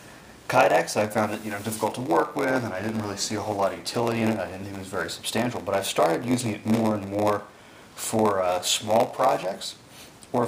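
A block size mismatch (padded) runs through the whole clip. One stage hands over shorter blocks than the next stage reads. The gap at the end of each block is filled with silence. The block rate fits a 512-sample buffer. A steady buzz sits under the sound at 93.8 Hz. The audio also plays at 0.938 times normal speed, about 6% slow. The pitch stays about where it should be.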